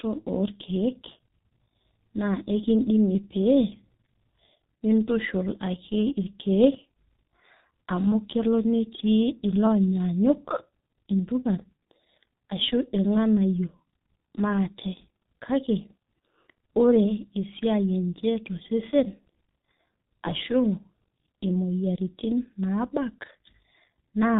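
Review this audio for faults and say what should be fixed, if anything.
G.723.1 codec damage runs throughout the speech. Nothing passes above 4 kHz, and the 30 ms frames with a slowly updated voice model leave the speech heavily muffled and hoarse, with smeared consonants, which fits a low bitrate near 6 kbit/s. Prevent it by sending or archiving through a wideband codec at a higher bitrate instead of G.723.1.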